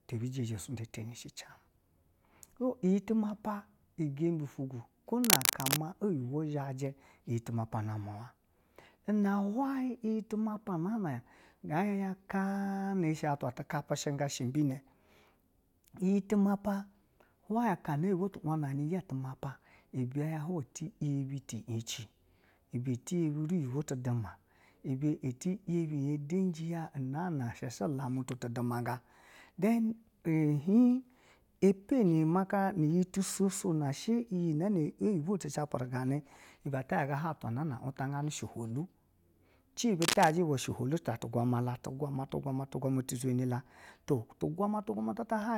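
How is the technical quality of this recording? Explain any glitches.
The recording is marred by two bursts of cable scratch noise, from 5.24 to 5.79 s and from 40.02 to 40.31 s. Each is a dense, ragged scratching over the speech, a little louder than the speech in the first burst and about level with it in the second. The likely cause is a worn cable or connector being moved, which makes the contact resistance jump rapidly. Unlike a single click or a clean dropout, the noise is a rough, rustling texture lasting a fraction of a second.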